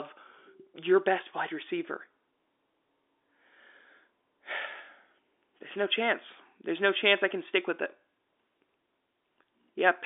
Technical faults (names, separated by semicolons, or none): none